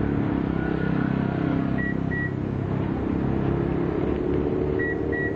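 No faults detected in the audio.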